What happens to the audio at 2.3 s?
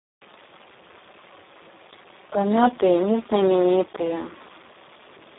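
At 2.3 s the speech carries Speex codec damage that runs through the whole clip. This CELP codec rebuilds speech from a compact model and a coded excitation. Here the excitation gets very few bits, which fits a setting near 4 kbps. The result is heavy. The speech sounds hoarse, buzzy and close to robotic. The band is narrowed to a telephone-like 300 Hz to 3.7 kHz. Nothing is heard above 3.8 kHz.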